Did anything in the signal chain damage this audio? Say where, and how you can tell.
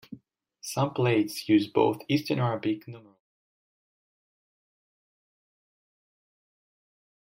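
No, nothing along the way damaged this speech; the gentle fade-out that begins around 2.5 s and finishes at 3.21 s is just an editor's smooth fade.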